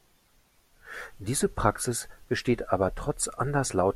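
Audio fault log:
Nothing to log here, this speech clip comes through without any faults to report.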